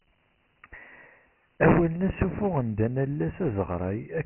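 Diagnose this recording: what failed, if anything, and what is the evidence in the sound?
Codec stage: Dialogic VOX ADPCM, fitting 4-bit samples at 6,000 a second, cuts everything above 3 kHz and leaves heavy gritty hiss trailing the speech throughout.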